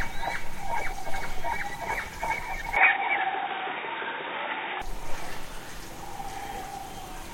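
From 2.76 s to 4.82 s the sounds turn abruptly dull and boxy, with nothing above 3.8 kHz, a level shift of roughly 5 dB, and a faint new noise floor. The likely cause is an input switched to a poorer device. A spectrogram shows a sharp ceiling during that span.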